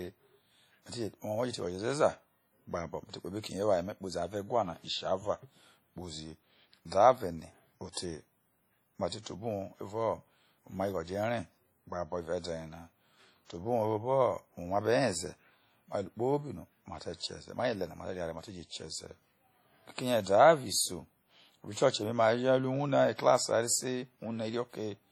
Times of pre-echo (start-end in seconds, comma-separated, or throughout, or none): 7.92-7.97